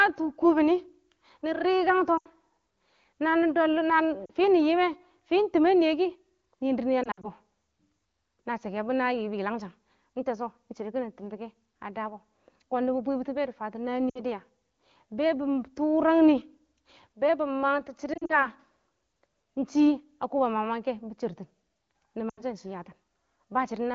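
Speech with six brief warbles and dropouts, where the sound smears, thins and recovers a little rough: 2.17 to 2.27 s, 4.25 to 4.30 s, 7.03 to 7.28 s and 18.13 to 18.47 s (scattered stutters), 14.09 to 14.20 s, and 22.29 to 22.41 s. These are lost AMR speech frames. Radio errors corrupted frames, so the wideband decoder repeated its last good settings at falling gain, producing gaps of 40 to 100 ms.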